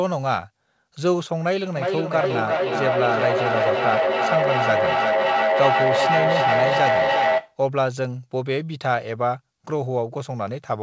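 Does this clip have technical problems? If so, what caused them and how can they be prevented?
Yes: feedback echo between two devices from 1.77 to 7.61 s, repeating roughly every 0.4 s and building to about 2 dB above speech instead of decaying like ordinary room echo. Muting one device's speaker or microphone, or joining from a single device, prevents it.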